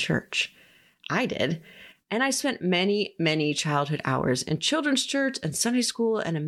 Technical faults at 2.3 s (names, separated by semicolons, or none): none